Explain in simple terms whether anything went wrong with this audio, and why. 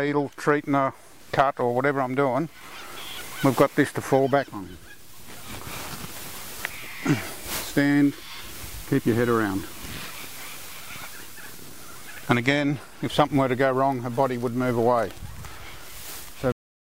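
Something went wrong right at the finish: a cut-off end at 16.52 s. The sound stops mid-flow and drops straight into silence, with no natural fade. The last stretch of audio was simply never written out or played, so the recording ends abruptly.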